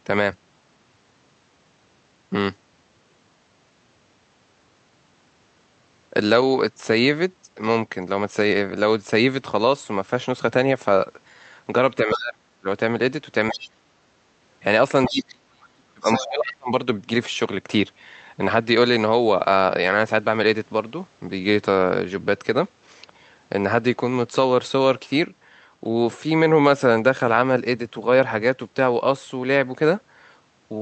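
At 12.04–12.66 s, speech is suppressed in double talk. The voice drops steeply, by roughly 35 dB. Within that dip, at 12.13–12.18 s, the other side's voice leaks through as a brief scrap. At 13.49–13.68 s, a fainter leak of the other side's voice appears. From 13.51 to 13.98 s the talker is pushed down again. At 15.05–15.25 s, the other side's voice leaks through once more. The longest suppression runs from 15.08 to 16.7 s and lasts about a second and a half. Inside it, at 16.03–16.26 s, comes a fairly strong leak. The leaks sound like quieter scraps beneath the talker. Both faults likely come from an echo canceller that could not separate the two talkers speaking at once.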